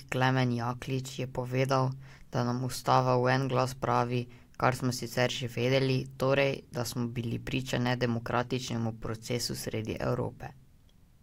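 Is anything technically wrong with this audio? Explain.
No, nothing technically wrong can be heard in this speech recording. The signal carries no audible faults from beginning to end.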